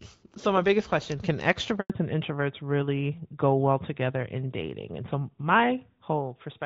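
At 1.80 s the speech cuts out abruptly and stays silent for 100 ms, resuming at 1.90 s. This is a handover gap: while the call switched networks, no speech frames reached the receiver, so whatever was said in that tenth of a second is lost.

From 1.90 s to the end the speech turns duller and rougher, with nothing above 4 kHz. This is a fallback to narrowband: the call dropped from the clearer HD Voice codec, which fits AMR-WB near 12.65 kbit/s, to narrowband AMR, which cannot carry that upper band.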